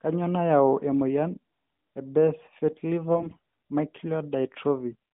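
From 3.15 to 3.39 s, AMR bit errors corrupt the speech, with around one bit in ten flipped. Pitch and level hold, but the voice turns hoarse and gargly rather than dropping out as lost frames would.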